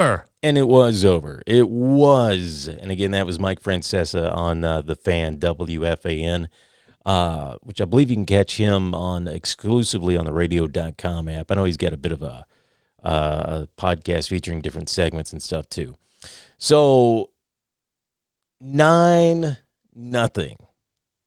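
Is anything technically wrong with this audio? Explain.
No, no technical faults here.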